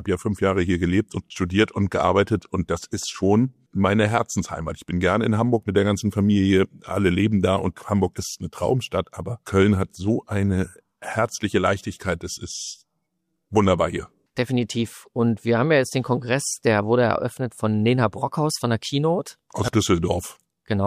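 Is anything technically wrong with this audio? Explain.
No, nothing technically wrong can be heard in this audio. There is nothing here that calls for a fix.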